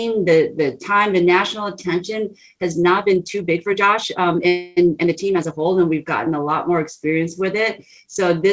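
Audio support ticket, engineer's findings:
Time-stretched section, 2.95 to 5.68 s. Likely a stretch/squeeze stage fitting audio to a target length, pitch held by dropping short segments. Result: pace jumps abruptly to about 1.5x while pitch stays put; rushed texture, no pitch shift.

Call audio freeze, 4.48 to 4.79 s, inside the stretched stretch. Packets likely delayed, jitter buffer drained; receiver extended the last sound for about 287 ms as a fading buzz or hiss, no silence. Playback then resumed where it stopped, nothing lost, everything after pushed about 287 ms later. Audio band ends at 8 kHz, consistent with G.722 at 64 kbps on the call path.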